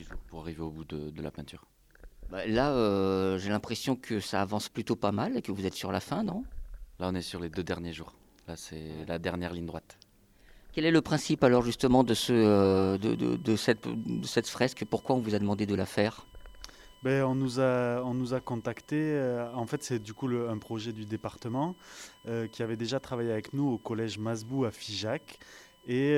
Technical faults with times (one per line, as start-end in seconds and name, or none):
12.05-26.17 USB whine